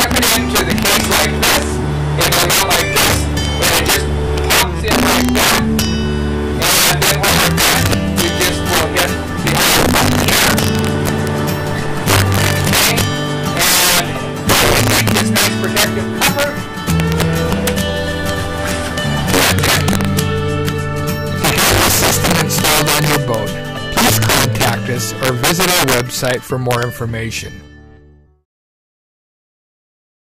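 Integer overflow runs throughout: a gain about 11 dB too hot wraps a few percent of samples to the opposite sign, producing harsh, violent cracks on peaks.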